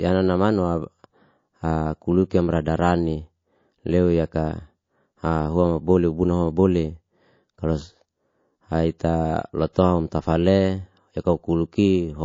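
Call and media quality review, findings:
MP3 compression, throughout: watery, swirling texture on the speech, plainly audible damage. Likely cause: low-bitrate MP3 encode, sound fitting about 32 kbps, weak frequency lines dropping in and out per frame.

Pre-echo, 9.73 to 9.76 s: short hiss about 15 dB up, spreading 33 ms ahead of a sharp attack. Codec noise smeared across a long transform block, about 72 ms, no short-block switching. Unlike a click or reverb, the noise comes before the attack, not after.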